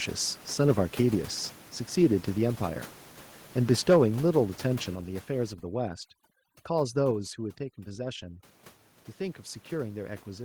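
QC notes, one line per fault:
4.95 s and 7.11 s, microphone volume stepped down: the whole signal drops about 5 dB, then about 4 dB, in a single instant. The likely cause is the input gain being lowered in one step. Voice and background fall together and keep their tone, which sets this apart from noise removal.
5.53 to 8.44 s, overdone noise removal: the room noise, normally about 22 dB below the speech, drops and breaks up into twinkling specks. Individual frequency bands near the noise estimate are being cut, so the tone changes rather than the overall level.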